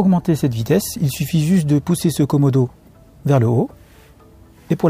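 No technical faults can be heard in this audio.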